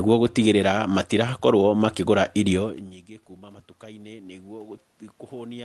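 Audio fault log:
3.39 to 5.64 s, automatic gain rising: after the input drops by about 23 dB when the talker moves away around 2.5 s, the gain control judges the speech too quiet and raises its gain gradually, so voice and room noise swell together.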